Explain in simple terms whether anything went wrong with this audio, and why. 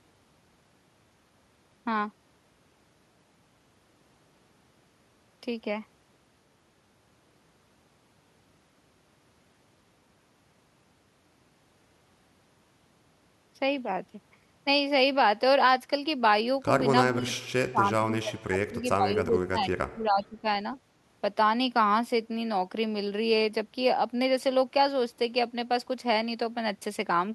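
From 17.09 to 20.46 s, the speech suddenly drops away, nearly to silence at its worst. This is speech suppressed in double talk. Both ends were likely talking at once. The echo canceller mistook this voice for returning echo and turned it down.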